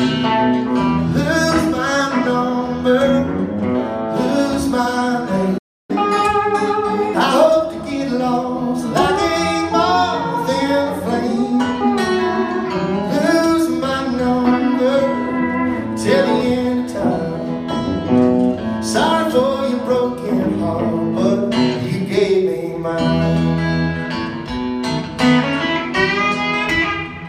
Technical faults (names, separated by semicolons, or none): playback stall; catch-up at higher speed